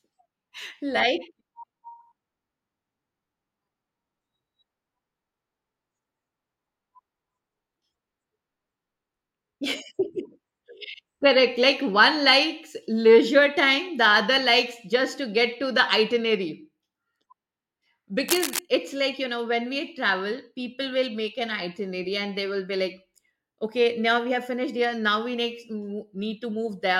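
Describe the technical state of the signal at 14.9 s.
At 14.9 s the speech signal is intact, with no audible dropout, distortion, glitch or other technical fault at that moment.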